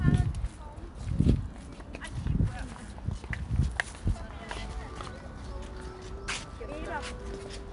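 4-bit ADPCM compression throughout this sound, fitting an 89 kbps stream: coarse predicted steps add gritty hiss that tracks loudness, and nothing remains above 10.6 kHz.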